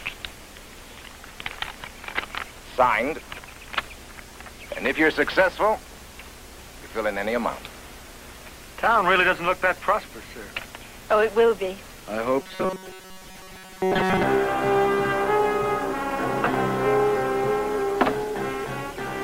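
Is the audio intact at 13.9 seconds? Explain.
No. From 12.40 to 14.24 s there's robotic sound from repeated short buffers, likely audio arriving too seldom. Repeating roughly 5 ms segments imposes a rigid 188 Hz metallic buzz that replaces most of the real sound. A waveform shows identical short cycles, and a spectrogram shows an evenly spaced harmonic comb.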